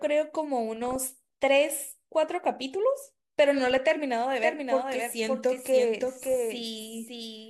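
Speech recording with a doubled audio track from 4.40 s to the end: a second full-band copy of the speech enters abruptly, trailing the original by about half a second and sitting roughly 5 dB lower, with no decay or room colour. On a spectrogram every syllable pattern reappears as a fainter clone shifted right by that gap; the waveform shows overlapping envelopes. The likely cause is the audio being captured again through a slower path.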